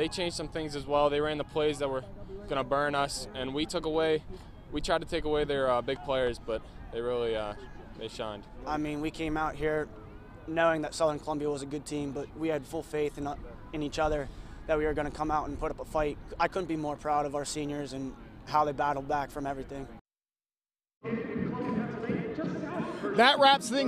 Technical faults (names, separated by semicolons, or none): none